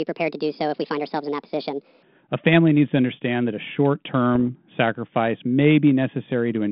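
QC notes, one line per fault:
0.0–2.03 s, section at the wrong speed: sound runs 1.45 times fast, pitch raised about seven semitones, hurried and high, likely from playback against the wrong clock.
4.35 s, bit errors on an ADPCM link: a single hit on the 32 kbit/s G.726 path disturbs the decoder's step size and predictor, producing a brief rough pop with a momentary level change.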